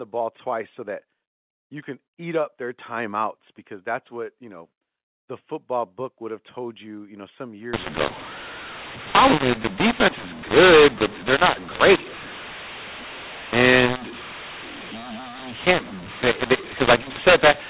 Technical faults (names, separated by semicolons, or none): mu-law and A-law mixed up